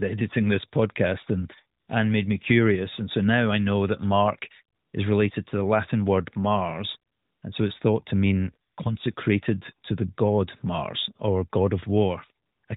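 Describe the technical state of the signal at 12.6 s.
At 12.6 s the signal is in AMR comfort noise, running from 12.46 to 12.64 s, with a further 20 ms burst at 12.66 s. The phone stopped sending speech frames and the receiver filled the pause with smooth synthetic noise. Unlike a dropout, the gap is not silent.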